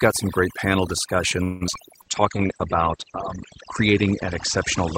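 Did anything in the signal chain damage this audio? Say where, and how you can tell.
Yes. Call processing: the noise removal is set far too aggressively across the whole clip. Between phrases the background collapses to near silence with faint twinkling specks. The suppressor is pulling individual frequency bands down hard whenever they sit close to its noise estimate, so the quieter parts of the speech are being removed along with the noise.

Network and jitter buffer: from 1.43 to 1.63 s the audio stalls into a fading buzz-like continuation of the last sound, and then resumes where it left off. This is a call audio freeze, likely caused by packets held up in transit until the jitter buffer ran dry. Nothing is lost. Instead, about 175 ms of synthetic fill is inserted, which pushes everything after it later by the same amount.

Network, decoder concealment: right after the freeze there are two short concealed packet losses, at 1.67 to 1.70 s and 1.72 to 1.75 s. 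Each one is a brief smear or wobble where the decoder extended the preceding sound and then blended back into real audio. The first drops about 40 ms of the original audio and the second about 20 ms, so short sounds in those spans may be missing.

Codec: from 2.02 s to the end there is a call bitrate drop. The audio turns rough and muffled, with the top end gone above about 8 kHz where it had previously extended to around 20 kHz. This fits the encoder being throttled from roughly 32 to 11 kbps after the bandwidth estimate fell. The coarsest stretch lasts about 1.3 s.

Jitter buffer: from 2.04 to 2.48 s the speech runs slower at an unchanged pitch, with drawn-out sounds. This is a jitter buffer slow-down. The receiver was rebuilding its reserve by repeating individual pitch periods, which adds about 45 ms and plays that section at roughly 92% speed.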